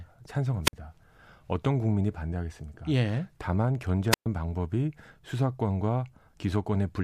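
Two wireless microphone squelch dropouts interrupt the speech, at 0.63 to 0.73 s and 4.11 to 4.26 s. The FM signal fades, hiss swells briefly, then the receiver's squelch mutes the output for 52 ms and 121 ms before the voice returns.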